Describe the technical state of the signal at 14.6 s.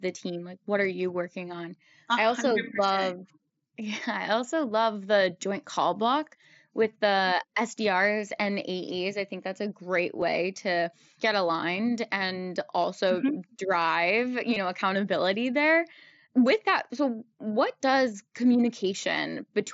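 At 14.54 to 14.56 s, just before "know accountability there with", there is concealed Bluetooth headset packet loss. Around 22 ms of headset audio failed to arrive, which fits about three lost frames, and the phone filled the hole by repeating the closest-matching piece of the preceding waveform. The result is a brief buzzy, steady-level patch with a slight warble as the real signal resumes. A raw dropout would instead fall silent or click. The mSBC wideband codec also limits the speech to 8 kHz here.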